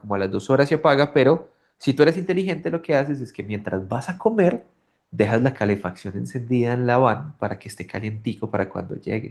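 Speech clip with no technical faults; the Opus voice compression leaves only a light coding texture across the full band, consistent with hybrid-mode Opus at around 24 kbps.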